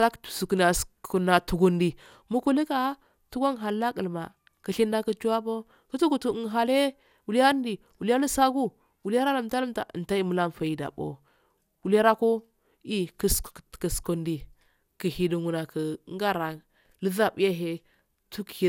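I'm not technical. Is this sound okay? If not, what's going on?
No. All the way through, the speech has generation loss: it sounds swirly, hollow and smeared, and the starts of sounds are blurred. That is more damage than one rough compression would cause, so it was likely compressed and re-saved about five times.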